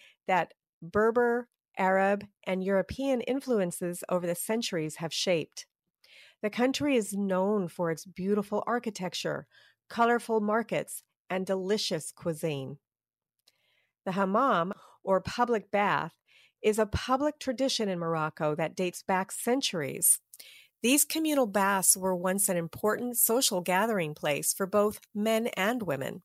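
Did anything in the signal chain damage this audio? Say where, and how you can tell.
Yes. Pre-emphasis left on from 19.81 s to 26.24 s: the speech turns thin, bright and sibilant, with treble about 14 dB hotter at 10 kHz than at 1 kHz. That matches an FM-style 75 µs boost whose matching de-emphasis cut was never applied at the receiving or playback stage.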